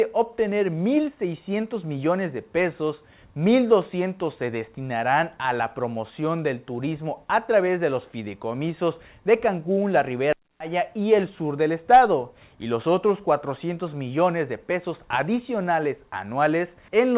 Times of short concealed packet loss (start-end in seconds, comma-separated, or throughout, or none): none